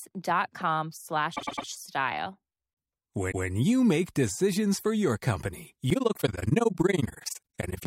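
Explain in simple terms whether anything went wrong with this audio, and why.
Two kinds of fault can be heard in this speech.

Repeated frames: at 1.35–1.66 s a tenth-of-a-second chunk plays three extra times, and at 3.31–3.46 s a 0.16 s chunk plays once more. This produces a stutter. The data was written or sent more than once, adding about half a second in total.

Overlap-add ripple: from 5.90 s to the end the loudness pulses roughly twenty times a second, which gives a fast, rough flutter. The sound was chopped into overlapping slices and rejoined with overlaps that don't add back to a steady level.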